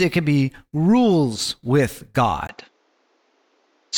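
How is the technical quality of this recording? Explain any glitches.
The recording has one clear glitch. At 2.47 s, after a 20 ms gap, the speech turns duller until the end. Nothing above 7.6 kHz remains. A faint new background noise appears. Loudness barely changes. This is likely an input switched to a poorer device with a narrower band.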